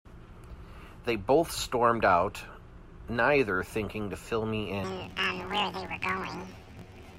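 From 4.84 s to the end, planar audio is read as interleaved. Each 21.33 ms block plays twice at double speed, so the speech jumps an octave with a 46.9 Hz flutter.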